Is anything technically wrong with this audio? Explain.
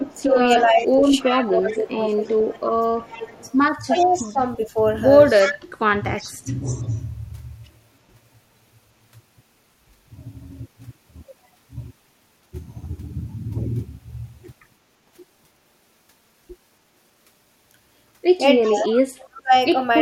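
Yes. Two related problems appear together in three places.

Echo leak runs from 0.01 to 4.31 s, 5.41 to 5.54 s, 6.16 to 7.0 s and 18.62 to 18.95 s. A faint copy of the voice trails it by 344 ms, mostly about 20 dB down but about 10 dB down at 5.41 s. This is likely residual loudspeaker pickup that the far end's echo canceller failed to remove.

Speech suppressed in double talk covers 0.23 to 4.77 s, 5.42 to 6.66 s and 18.63 to 19.53 s, overlapping the echo. The voice dips in pieces, by around 15 dB early on and by roughly 25 to 30 dB later. This is likely an echo canceller mistaking the talker for echo and attenuating both.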